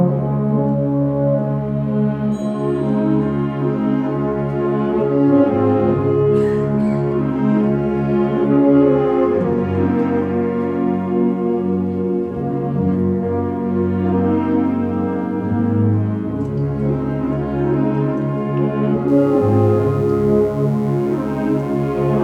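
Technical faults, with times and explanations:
19.08–22.23 s, mains buzz: interference from the 60 Hz supply gets into the signal path as sharp spikes twice per cycle, so a steady, raspy buzz rich in 60 Hz harmonics sits roughly 30 dB below the sound and runs to the end.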